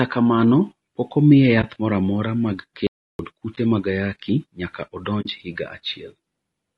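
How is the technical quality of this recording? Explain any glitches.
The recording is noticeably degraded: the speech carries plainly audible coding damage from start to finish, and it is interrupted by one silent dropout and several brief muted gaps.

Low-delay AAC compression runs throughout and is the likely cause of the rough, grainy texture. Its short frames resolve pitch harmonics poorly, so at what sounds like a low bitrate near 32 kbps, noise fills the spaces between harmonics and the top band sounds thin and synthetic.

AAC frame loss with muting occurs at 1.61 to 1.64 s, 3.55 to 3.58 s and 5.21 to 5.26 s. The first two gaps last about 20 ms each, fitting a single lost frame, and the third lasts about 40 ms, fitting two. The decoder zeroed the missing spectrum, and the overlapping windows fade the speech out and back in, leaving brief dips for the single frames and a short soft-edged hole for the pair.

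An audio dropout to silence runs from 2.87 to 3.19 s, about 0.32 s long. The speech cuts off mid-flow into silence with no room tone. The input was likely lost briefly while the recorder kept writing silence, so that stretch of speech is gone.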